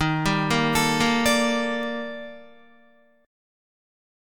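A receiving device running on its own clock, unlocked from the sender's, slips against the digital link. The result is word clock ticks from 0.30 to 4.13 s: about seven sharp clicks, roughly every 0.7 s, each one dropped or repeated sample, suggesting a clock mismatch near 30 ppm.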